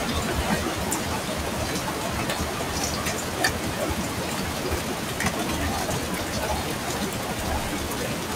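No technical faults can be heard anywhere in this recording of sounds.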